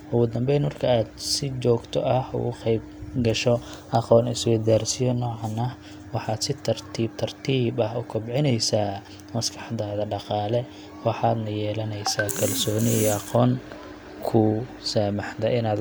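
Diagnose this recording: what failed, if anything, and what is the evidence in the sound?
No fault is audible here.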